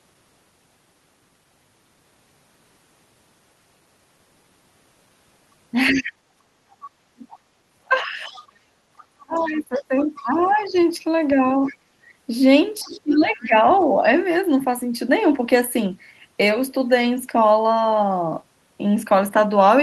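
It's a speech clip with a speakerphone-style echo problem throughout the middle stretch. Other side's voice leaking through shows up as brief scraps at 5.87 s and 11.65 s, a longer run from 6.83 to 10.71 s, and a fainter bit from 12.82 to 13.18 s. It sits well below the talker, roughly 20 dB down and quieter still near 13 s, most likely far-end audio the echo canceller didn't fully subtract. Speech suppressed in double talk follows from the same overlap: the talker's own voice dips from 5.9 to 8.36 s, 9.18 to 10.75 s and 12.81 to 14.04 s, by as much as 30 dB in the first stretch and around 20 dB later. It's likely the canceller couldn't separate the talker from the echo and turned everything down. Finally, background gated by the echo canceller pulls the room sound down by about 17 dB between 11.9 and 12.09 s, roughly a fifth of a second, before it comes back once the canceller releases.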